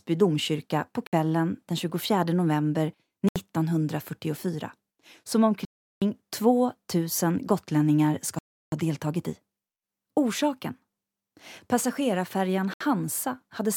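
The speech drops to silence at 1.07, 3.29, 5.65, 8.39 and 12.74 s, resuming where it stopped, a Bluetooth stall, likely from interference draining the headphone buffer.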